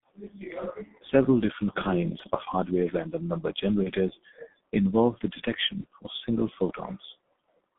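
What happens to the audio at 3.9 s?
Just after "of hardware random number", from 3.83 to 3.91 s, there is a dropout covered by VoIP packet loss concealment. The gap points to a single lost 30 ms frame. The decoder fills it by repeating its last pitch and filter settings at falling gain, so the sound is briefly stretched out and fades before the signal recovers. On a waveform this looks like a short stretch of regular, shrinking cycles. A spectrogram shows flat, smeared harmonic bands there instead of changing formants.

That dropout sits on top of the G.723.1 codec's heavy coloring across the whole clip. The codec runs at 6.3 kbit/s, and the line band spans roughly 150 Hz to 3.7 kHz. The spectrogram is therefore empty above about 3.7 kHz, and consonants look blurred. The coarse frame-by-frame updates leave the sound muffled and hoarse.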